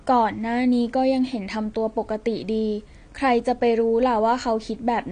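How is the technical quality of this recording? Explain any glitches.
The technical quality is poor. The speech carries plainly audible codec damage from start to finish. Nothing is present above 9.8 kHz. The top of the spectrum is cut away, and what remains sounds smeared, with a warbling, fizzy edge on sibilants and held vowels. This is likely AAC compression at a low bitrate, consistent with around 32 kbps AAC-LC. The encoder drops high bands and coarsely quantises the rest frame by frame, leaving holes and swirly artefacts. A simple low-pass filter would sound dull but clean, without that metallic warble.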